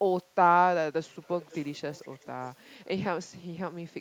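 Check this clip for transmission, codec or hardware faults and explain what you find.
One fault appears twice: echo leak in the speech, from 1.41 to 2.27 s and again from 2.45 to 2.51 s. A faint copy of the voice trails it by about 0.47 s, roughly 25 dB down and then weaker still. This is likely a far-end speakerphone whose echo canceller let its pickup through. On a spectrogram it shows as a dim, smeared duplicate of the speech harmonics offset in time, and on the waveform as low ripples where there should be silence.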